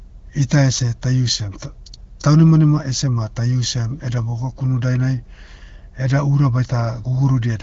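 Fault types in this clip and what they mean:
No faults turn up here, just speech carried over an AMR wideband (HD Voice) link, with the top end stopping near 6.9 kHz and only light coding traces, which fits one of that codec's higher rates.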